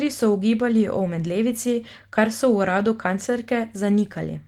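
Nothing in this speech stood out as a technical fault on listening.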